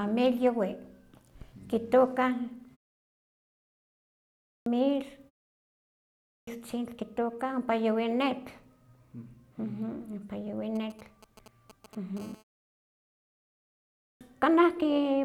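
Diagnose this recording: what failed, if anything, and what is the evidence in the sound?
Clipped start after a pause, at the playback device: after silences of 1.78, 1.07 and 1.66 s, speech resumes abruptly at 4.46, 6.29 and 14.01 s with its first 0.18 to 0.2 s missing. The idle output had slept and needed that long to wake. On the waveform each onset rises sharply out of silence, with no gradual build-up.

GSM signalling bursts, in the analogue wiring: from 10.76 to 12.19 s a galloping dit-dit-dit of ticks and brief 217 Hz buzzes sits roughly 20 dB below the speech. A nearby 2G phone exchanging signalling sent grouped radio bursts that the audio circuit rectified. A spectrogram shows clustered vertical striations with harmonic bands.

GSM phone buzz, in the same analogue path: from 12.20 to 13.82 s a steady, raspy 217 Hz buzz runs at about 28 dB below the speech, unrelated to it. The phone had moved into a call and was transmitting in bursts 217 times a second, and its rectified pulses produced the buzz. 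The spectrogram shows a dense comb of harmonics spaced 217 Hz apart, and the waveform shows a regular pulse train.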